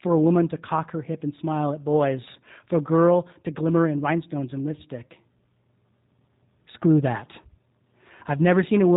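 G.729 codec damage runs throughout: nothing passes above 3.8 kHz, and speech rebuilt from a filter and sparse pulses sounds plainly rough, fitting 8 kbit/s G.729A.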